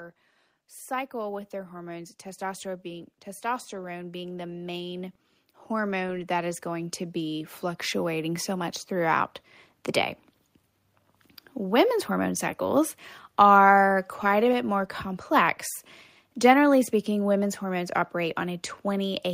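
From 0.88 s to 8.77 s, automatic gain rising lifts the level by about 16 dB as the gain control, finding the input too quiet, turns itself up. Voice and background noise swell together, and the waveform envelope widens steadily while the spectrogram's noise floor brightens alongside the speech.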